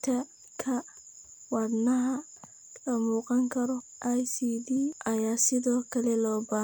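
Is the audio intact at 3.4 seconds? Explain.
Yes, the speech at 3.4 seconds plays through cleanly, with no dropout, click, distortion or other break in the audio at that point.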